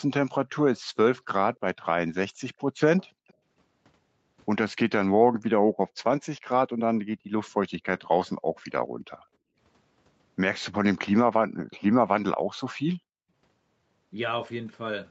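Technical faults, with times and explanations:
0.84–0.96, 3.07–3.27, 5.24–6.0, 7.05–7.31, 8.38–9.57, 11.45–11.59 and 12.95–13.06 s: background gated by the echo canceller. The room tone drops by about 40 dB while far-end audio is playing, then comes back when the canceller releases. The 8.38–9.57 s dip is the longest, with short gaps adding up to well under a second.
2.59–3.34 s: echo leak. A faint delayed copy of the speech trails the original by about 0.3 s, around 30 dB down. It's likely a far-end loudspeaker feeding back into the microphone, with the echo canceller not fully removing it.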